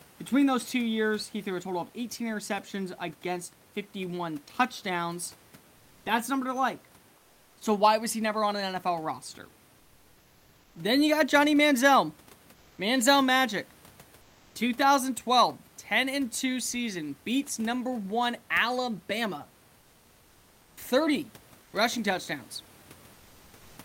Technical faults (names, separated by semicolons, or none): comfort noise in place of the background